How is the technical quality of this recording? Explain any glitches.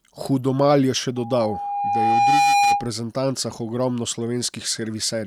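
The recording has one clear fault. From 1.16 to 2.90 s there is loudspeaker feedback squeal. A microphone picks up its own loudspeaker, and the loop runs away at 813 Hz. The tone swells over about a second and a half until it sits a few dB above the speech. On a spectrogram it shows as a single horizontal line brightening steadily, and on the waveform as a swelling sinusoidal envelope.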